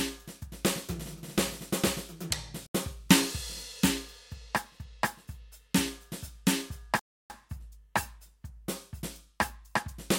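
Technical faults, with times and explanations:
2.67 to 2.74 s and 6.99 to 7.30 s, Bluetooth stall: the music drops abruptly to silence, first for about 80 ms and then for about 306 ms, before carrying on. The gaps are dead quiet rather than crackly. The likely cause is radio interference delaying packets on the wireless link, so the headphones' small buffer emptied and playback had to wait until retransmitted packets arrived.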